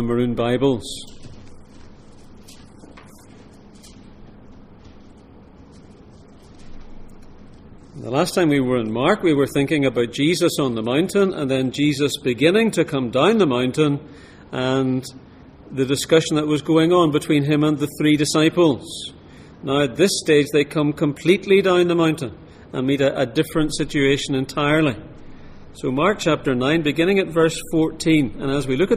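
No technical faults are audible anywhere in the recording.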